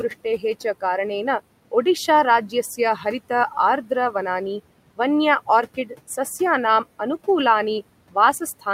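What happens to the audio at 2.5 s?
At 2.5 s the noise suppressor artifacts that run through the whole clip are present: the suppressor pulls the room noise down by about 18 dB between phrases and lets it back up beneath the speech. On a spectrogram the background floor pumps and shows flickering, patchy gaps.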